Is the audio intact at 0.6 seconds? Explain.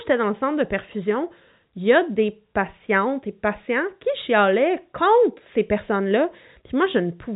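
Yes, the audio is intact at 0.6 seconds, with the speech carried cleanly through the G.711 telephone coding, which keeps it within the telephone band and passes nothing above about 3.8 kHz.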